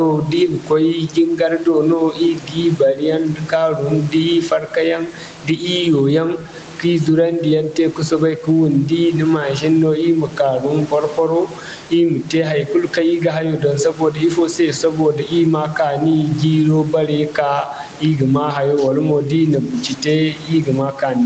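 Speech with gain pumping throughout: the gain swings by something like 10 dB, squashing loud and soft parts together. The likely cause is microphone gain set far too high, with a fast limiter or compressor pulling it down on each peak. The band stops near 8 kHz, consistent with an Opus call path.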